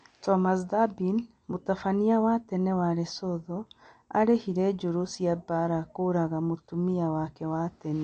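MP3 compression, throughout: nothing sounds above 8.3 kHz and the speech turns plainly watery, likely a bit-starved encoder near 48 kbps cutting treble and dropping weak frequency lines.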